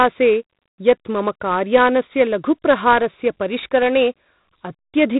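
From start to finish the speech carries heavy 4-bit ADPCM compression. Each sample is a coarse step from a prediction, so a gritty hiss rides on louder syllables and sharp onsets smear. Nothing reaches above 3.9 kHz, which dulls everything and fits a 32 kbps stream.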